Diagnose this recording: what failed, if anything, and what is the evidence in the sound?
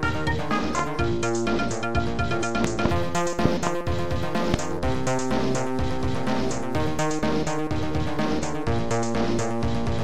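A likely analogue wiring or switching transient injects voltage pulses: loud pops at 0.79–0.82 s, 2.64–2.88 s (double), 3.45–3.69 s (double) and 4.54–4.56 s, about 15–20 dB above the sound.

From 7.03 to 9.24 s one channel lags by about one sample before mono summing. This channel delay causes comb filtering, with the first notch near 20 kHz, dulling the top end.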